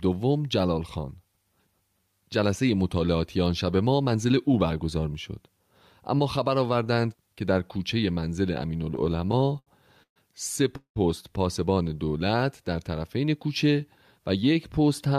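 Speech that begins to stutter from 8.95 to 10.18 s, catching and dragging through ten short hangs, the longest 133 ms, which together fill 312 ms, about a quarter of that stretch, without losing anything. These are repeated stalls (stutter): packets kept arriving late, the jitter buffer kept running dry, and the receiver stretched the last sound each time until it could continue. From 10.77 to 10.98 s the sound holds as a fading buzz and then drops to silence for 90 ms, 190 ms in all, before resuming where it left off. This is a call audio freeze, likely caused by packets held up in transit, which emptied the buffer and pushed the delay up by 190 ms. Between 11.74 and 12.37 s the speech turns drawn out at an unchanged pitch, running at 84% of normal speed with 113 ms added. This is a jitter buffer slow-down, where repeated pitch periods rebuild the buffer's reserve. From 14.19 to 15.14 s the speech sounds slightly hurried, running at 105% with around 50 ms trimmed away. 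This is a jitter buffer speed-up, where short pitch periods are cut to shed excess delay.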